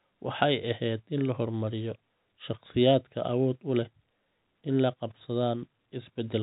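Nothing goes wrong anywhere in this speech, which just carries the narrow, sub-4 kHz sound of ordinary A-law telephone coding along with its faint level-following hiss.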